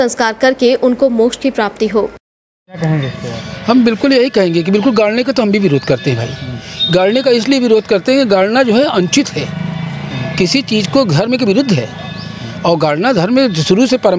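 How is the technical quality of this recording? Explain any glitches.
The recording has one fault, present throughout: gain pumping. The likely cause is input gain set far too high, with a fast limiter clamping the level on every loud sound. The gain swings by something like 10 dB, leaving loud and soft parts squashed close together. The call microphone processing, with nothing above 8 kHz, sounds as expected.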